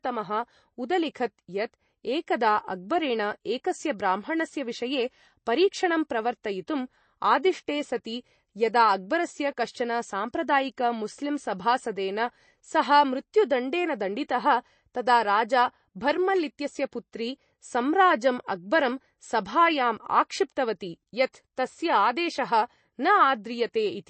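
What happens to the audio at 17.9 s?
At 17.9 s you're hearing the same MP3 compression damage that runs through the whole clip. There's nothing above about 8.3 kHz, and starved frequency lines flicker in and out, so the speech sounds watery and the s sounds chirp. That fits a low bitrate, likely around 32 kbps.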